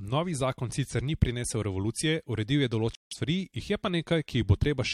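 At 2.95 s the speech cuts to dead silence for about 0.18 s, ending at 3.13 s: a corrupt frame muted fault, where damaged compressed frames were rejected and replaced with silence. The abrupt hole, likely spanning several consecutive frames, keeps timing intact, unlike a dropout that shifts what follows.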